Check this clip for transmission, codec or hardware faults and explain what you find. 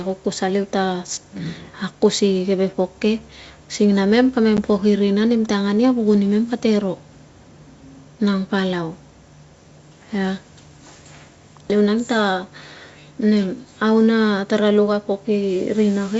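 One transmission fault is audible. Packet loss on an ADPCM call at 4.57 to 4.59 s, between "sing na mem" and "pok irina nemte angan": about one packet, roughly 10 ms of audio, drops out and is filled with silence. The receiving decoder's adaptive predictor and step size lose track of the sender's, so a hard-edged gap is heard and the speech resumes with brief distortion before settling. The G.722 wideband coding at 64 kbit/s carrying the call contributes at most a faint hiss.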